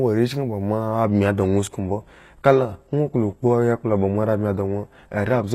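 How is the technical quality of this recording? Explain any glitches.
The recording has one clear fault: an adaptive stream at a lower bitrate from 1.04 s to the end. At that moment the speech loses its airy top and the treble turns thin, with more codec artefacts, as if the stream fell back to a much lower-bitrate version, which fits a switch from roughly 96 kbit/s AAC to a 16 kbit/s HE-AAC variant after the connection slowed. On a spectrogram, energy above 12.3 kHz stops abruptly at 1.04 s. The waveform shows no gap there.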